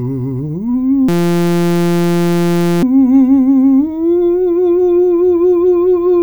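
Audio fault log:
1.09–2.83 s, system hang loop: the music gives way to a steady buzz at 172 Hz as one 5.8 ms fragment repeats some 300 times, which fits a 256-sample buffer. The system froze while the sound hardware kept replaying it, losing roughly two seconds of music.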